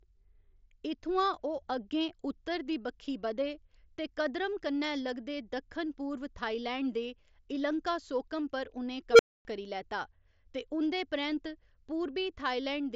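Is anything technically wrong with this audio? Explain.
Yes, there's an unstable filter fault from 9.11 to 9.45 s, right after "दे इलंकासोकम पर उ'नें" and before "करी लैता". A recursive filter runs away: a tone around 500 Hz swells to clipping in about 79 ms, overflows, and drops to silence for about 260 ms until the filter resets. The band-limiting to nothing above 7.7 kHz comes from the mSBC Bluetooth headset path and isn't a fault.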